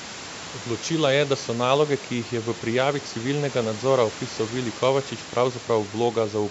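No technical faults can be heard in this speech.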